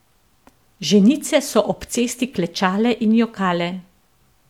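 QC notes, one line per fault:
No technical faults are heard at any point in the speech signal.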